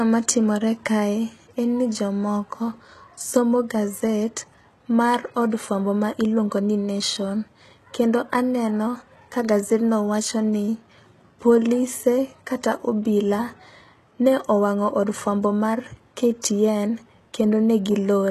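Speech, and the whole thing carries HE-AAC compression damage you can plainly hear: nothing above 12.4 kHz, and the treble sounds synthesized rather than captured, so s sounds come out gritty and a bit lispy. That's likely spectral band replication rebuilding the top end, which fits a low bitrate around 16 kbps.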